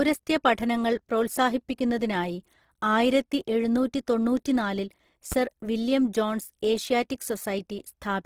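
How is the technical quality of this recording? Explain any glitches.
The recording has two problems: grainy codec damage throughout, and one sharp pop shortly after the five-second mark.

Opus compression runs through the whole clip. The speech sounds rough and grainy, with noise-like texture where detail should be. Unlike MP3's swirling holes, the bands stay filled, which points to the likely cause: Opus in CELT mode, starved of bits at a low rate, perhaps around 16 kbps.

A loud pop occurs from 5.32 to 5.35 s. It is a single sharp click, roughly ten decibels above the surrounding sound, which continues underneath it. It likely comes from a voltage step from a plug, switch or static. Being one brief event rather than recurring crackle separates it from dropouts or clipping.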